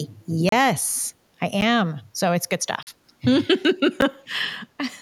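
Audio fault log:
0.20–0.24 s echo leak: a far-end echo canceller likely passed its loudspeaker pickup back, so a very faint copy of the speech returns 376 ms late.
0.49–0.52 s, 1.61 s, 2.83–2.87 s, 4.01 s block of digital silence: likely unfilled output buffers zero the sound for 32, 10.7, 42.7 and 10.7 ms; the 10.7 and 42.7 ms gaps are 512 and 2048 samples long.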